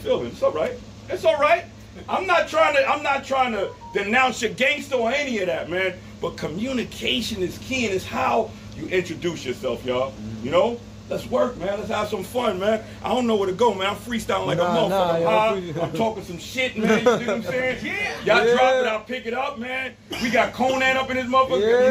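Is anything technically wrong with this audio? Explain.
No, nothing is technically wrong with this audio.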